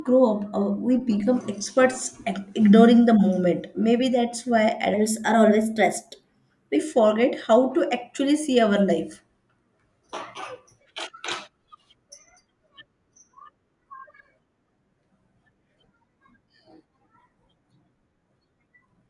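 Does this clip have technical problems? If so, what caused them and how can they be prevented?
Yes. From 4.94 to 6.76 s the speech is played at the wrong sample rate: it runs about 1.09 times too fast and sits about 1.5 semitones high, which fits 22 kHz audio being clocked out at 24 kHz without conversion. What separates this from a pitch-shift effect or time-stretch is that tempo and pitch rise together by the same ratio; neither changes alone. To prevent it, resample to the output device's rate before playback.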